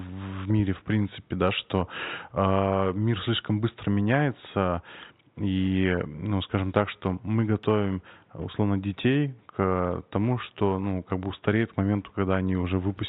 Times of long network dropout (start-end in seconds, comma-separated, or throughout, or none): none